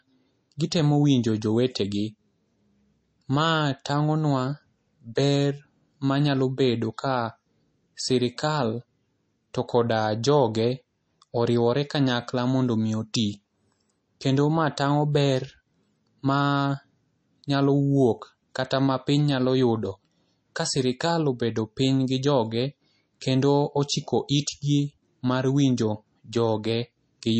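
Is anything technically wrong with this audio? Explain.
Yes, throughout the speech there is plainly audible MP3 compression, likely from a low-bitrate encode around 32 kbps. With bits scarce, the encoder cuts everything above 8.3 kHz and drops weak frequency lines frame by frame, giving a watery, swirly texture and metallic chirps on s sounds. A spectrogram shows a hard ceiling at 8.3 kHz and flickering holes below it.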